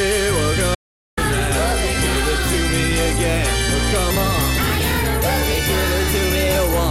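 An audio dropout to silence runs from 0.75 s to 1.17 s. The music stops abruptly and leaves digital silence with no background noise at all for about 0.42 s, then resumes mid-phrase. What played during that gap is missing. A total absence of signal like this is most likely a brief loss of input, such as a disconnected source or a momentary mute, while recording continued and wrote silence.

A section at the wrong speed begins at 4.11 s and continues to the end of the clip. From that point the music runs 1.12 times faster, and its pitch rises by about two semitones in the same instant, so the material sounds hurried and brighter. Because tempo and pitch jump together, this is likely a segment played back or resampled against the wrong clock.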